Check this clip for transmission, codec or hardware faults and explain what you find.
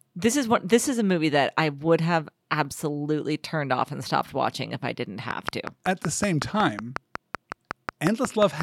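One fault is present: a train of clicks running from 5.31 s, just after "watching if I didn't", to 8.62 s. About twenty near-identical sharp ticks arrive at a steady 5.5 per second, peaking around 15 dB above the speech. The likely cause is interference from nearby equipment or a faulty connection or power supply injecting pulses. Unlike random crackle or dropouts, the even spacing and repeated shape stay the same through pauses, independent of the speech.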